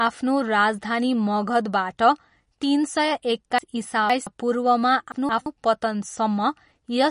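Speech, likely encoded as MP3 at a low bitrate around 40 kbps, has nothing above 10.6 kHz and plainly audible watery, swirling codec damage throughout. Chunks out of order, in pieces of about 171 ms, garble the audio: from 3.58 to 4.27 s a chunk plays three places late, and from 5.12 to 5.46 s one plays a place late.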